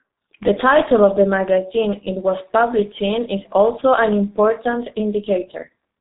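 From start to end, the speech carries heavy G.723.1 codec damage. Nothing passes above about 3.8 kHz, so the top of the sound is simply gone. The codec codes the signal in coarse 30 ms frames and refreshes its voice model slowly. That leaves the voice muffled and hoarse. Consonants smear into the vowels around them. The hoarse texture points to a very low bitrate, consistent with roughly 6 kbit/s telephony coding.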